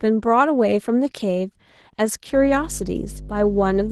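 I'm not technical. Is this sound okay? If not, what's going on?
No. The speech was squeezed hard by Opus voice compression, the kind used in internet calls, which throws away detail to keep the file small. Here it was pushed far enough that the damage is plainly audible from start to finish: the voice sounds rough, with a faintly robotic, processed edge, as if heard over a weak call connection rather than in person.

Mains hum also creeps in at 2.31 s and stays to the end. Electricity from the power supply leaked into the recording, most often through a ground loop or a nearby transformer. You hear it as a steady, low buzzing drone at 50 Hz, fairly loud compared with the speech, sitting underneath everything for the last second and a half or so.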